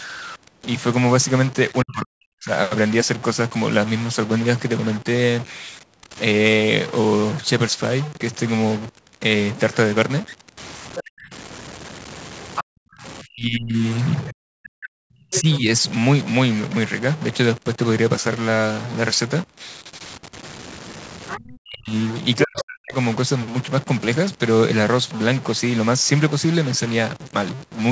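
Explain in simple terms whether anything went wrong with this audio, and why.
Yes, several things went wrong in this speech recording.

A noisy distortion runs through the whole clip, and the quiet gaps between phrases hiss instead of falling silent. This is a stuck bit. One bit in each digital sample seems stuck at a fixed value, likely because of a broken connection or a faulty converter. That pushes many samples off by a fixed step, so the waveform gets jagged edges and the pauses fill with noise.

Speech suppressed in double talk happens three times: from 1.83 to 2.5 s, from 11.05 to 15.67 s, and from 21.38 to 22.95 s. The talker's voice sinks almost to silence or breaks up into pieces, for a few seconds in total. Both people were likely speaking at once. The echo canceller could not tell the talker apart from the loudspeaker sound, so it turned both down.

The other side's voice leaking through is heard at 10.96 s and 12.56 s as brief scraps. 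It is heard for longer from 14.28 to 15.58 s and from 21.28 to 22.63 s. This second voice sounds quieter than the main talker. The far-end sound was likely playing from a loudspeaker, and the echo canceller did not fully remove it. So part of it reached the microphone and was sent back.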